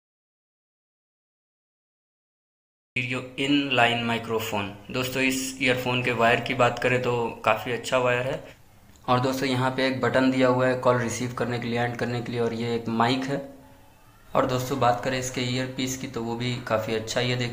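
Right from the top, 0 to about 2.96 s, there's an audio dropout to silence: pure silence, not even room tone. It's already under way when the clip starts, then sound cuts in mid-flow. Likely the input dropped out while the recorder kept writing.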